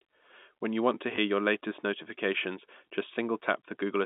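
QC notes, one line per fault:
1.16–1.18 s (after "you want to") and 3.14–3.16 s (after "your latest notifications"): packet loss with last packet repeated. A single 20 ms packet was lost and the previous one replayed, heard as a small blip.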